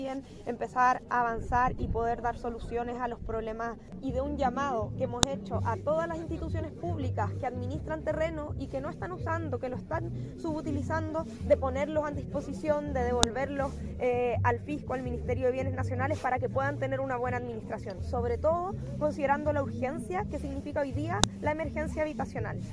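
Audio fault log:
5.23 s, 13.23 s, 21.24 s: file header played as audio. Each 8-second piece kept its WAV header when joined, so those bytes play as samples, giving a sharp, loud click.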